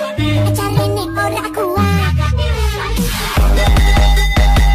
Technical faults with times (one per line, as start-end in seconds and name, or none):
0.76-0.85 corrupt frame decoded
1.99-2.04 corrupt frame decoded